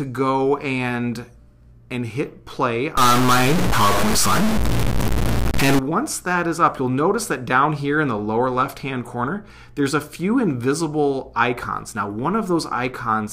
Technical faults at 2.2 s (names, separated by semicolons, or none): none